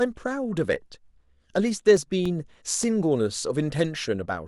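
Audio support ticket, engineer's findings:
CD scratch ticks, 1.68 to 2.83 s in the speech: five short regular ticks, about four per second, each a few milliseconds at most. Disc-side fault: blemish exceeds error correction once per revolution; player interpolates or mutes the damaged samples.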